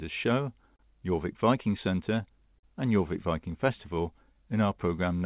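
Throughout the clip, clock drift between sender and receiver is at work: the sender's audio clock runs roughly 4 percent slower than the receiver's, so the jitter buffer keeps draining and the receiver must keep compensating to avoid running dry.

From 0.43 s to 4.89 s, that compensation shows up as repeated timing corrections. The receiver keeps repeating short pieces of speech, all in the same direction, adding roughly a tenth of a second overall and leaving the speech at about 98 percent speed. If heard at all, it comes across as uneven small hiccups and a wavering tempo.

At 0.76 to 0.81 s, a short stall from a late packet occurs. The buffer ran empty, and the receiver stretched the last sound by 32 ms until the packet arrived, then resumed at the same point. Nothing is lost, but a sound hangs on too long.

A second short stall from a late packet follows at 2.59 to 2.65 s. This time the held sound fills 45 ms, again with nothing missing, and the lag before playback resumes grows by the same amount.

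Across the whole clip, the call path's band limit is audible as nothing above 4 kHz, which fits a G.711 mu-law codec at 64 kbps.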